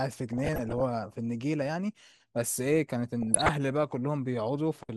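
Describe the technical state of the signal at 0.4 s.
At 0.4 s the speech is inside a burst of DAB burbling running from 0.33 to 0.82 s. Bit errors, at a rate of somewhere under one percent, have slipped past error correction and corrupt sample values and scale factors, so individual sub-bands leap in level frame by frame. It adds bubbling, blipping noise to the speech. A spectrogram shows blocky horizontal patches flaring and vanishing, and the waveform carries irregular level jumps.

Underneath, throughout the clip, the sound is dull with a gurgling, granular edge that points to MP2 compression, likely at about 80 kbps. Upper sub-bands switch off and flicker, and the remaining bands are coarsely quantised. On a spectrogram the top end is cut off unevenly, with bands blinking in and out and a grainy texture.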